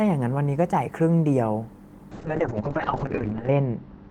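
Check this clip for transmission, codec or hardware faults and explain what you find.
There's one fault here, a call bitrate drop starting at 2.12 s and running to the end. The bandwidth estimate fell and the encoder was pushed to far fewer bits; the sound fits a slide from roughly 32 kbps to 6 kbps. With so little to work with, the codec quantises coarsely and the top end gets cut from 20 kHz down to 8 kHz, so the speech turns muffled and rough, bottoming out for about 1.37 s.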